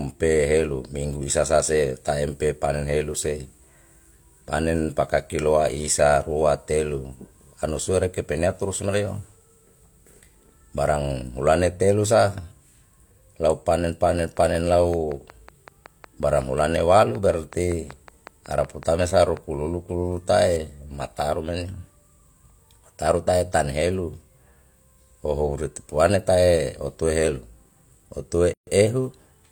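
From 14.19 to 19.38 s, a train of clicks ticks over the speech. About thirty regular pulses come 5.4 times a second, roughly as loud as the voice, likely from interference.

At 28.54 s, a gap at a join of encoded pieces cuts the sound for 134 ms. Untrimmed encoder padding leaves a silence with smeared edges before the speech resumes.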